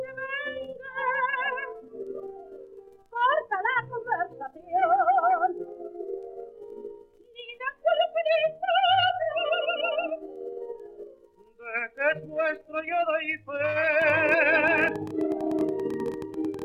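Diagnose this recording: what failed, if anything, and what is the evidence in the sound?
From about 14.02 s right through to 16.63 s there's a train of clicks riding over the sound: roughly thirty sharp ticks, close to 13 per second but unevenly spaced, and they hit at about the same level as the programme itself, so they're hard to miss, gaps included. Near-identical pulses on an irregular pace like that most likely point to interference getting into the analogue wiring, or a faulty connection or power supply.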